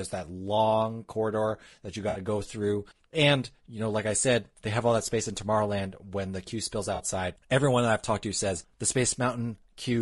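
Throughout the clip the speech sounds rough and grainy, with noise filling the gaps between pitch harmonics and a thin, somewhat synthetic upper band. This is most likely low-delay AAC compression (AAC-ELD) at a bitrate around 32 kbps. Its short frames give poor frequency resolution for voiced pitch, and at this rate the encoder cannot spend enough bits to keep harmonics clean, so the damage is plainly audible.

At 2.09–2.19 s, between "long corridor that you" and "go through", there is AAC frame loss with concealment. About 60 ms of audio, consistent with three lost frames, is replaced by the decoder's reconstruction from the last good spectrum. It sounds like a brief smeared, noisy patch. At 6.95–7.01 s, right after "when the queue spills", a 40 ms loss, consistent with two frames, produces a shorter, similar phasey blur.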